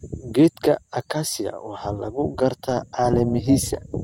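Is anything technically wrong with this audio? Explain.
Yes. From 2.70 s to the end at 4.03 s, there is overlap-add ripple. The speech was split into windowed frames and rejoined with overlaps that do not sum to steady gain. Level dips about 6 dB once per frame, roughly 400 times a second. It sounds like a metallic buzz with extra tones around each note.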